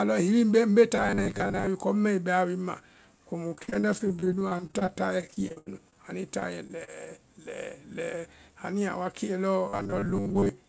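From 0.96 to 1.67 s the speech goes hard and metallic. That's robotic sound from repeated short buffers. There's a steady 100 Hz buzz pressed onto everything, and it still loosely tracks the talking. The likely cause is new audio arriving too rarely, so the playback loops the last 10 ms or so to cover the wait. About half of this stretch is repeats, and the real material in between just gets skipped. The same thing comes back from 9.68 to 10.49 s, again with a 100 Hz buzz and again roughly half repeated.

Between 3.48 and 5.96 s it's repeated packet loss, the robotic kind. Packets kept going missing, and each hole got patched by extending the previous sound before the next one hit. That's 27 gaps in about two and a half seconds, the longest 80 ms, with around a quarter of the span concealed. It comes across choppy and mechanical, with bits plainly missing.

At 6.40, 6.67 and 6.85 s there are three separate bits of short concealed packet loss. 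Each time about 20 ms never arrived, and the receiver bridged it by carrying the previous sound forward and blending back. The fills run 18, 13 and 25 ms. They show up as quick smears or little wobbles rather than anything you'd call a dropout.

Then from 8.73 to 9.13 s there's a jitter buffer speed-up. The buffer had more queued than it wanted, so it shaved off small pitch-period slices, roughly 40 ms in total. Playback runs at about 108% with the pitch unchanged, so that bit sounds a touch rushed. All of this rides on the G.722 call path, which has nothing above 8 kHz, so the top end is cut throughout.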